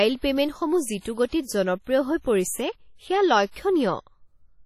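Throughout, the speech has a ringing, washy quality with hiss that swells and fades with the sound, and nothing above 15 kHz. Heavy WMA compression is the likely cause, consistent with roughly 32 kbps. A spectrogram shows a flat ceiling and blotchy, gapped mid-highs.

Pre-echo appears from 1.00 to 1.05 s and from 1.29 to 1.32 s. Quantisation noise from a late, sharp attack spreads backward through its transform block, so a short hiss, 53 ms and then 36 ms long, precedes each softened onset. On the waveform, a low fuzz rises just before each attack.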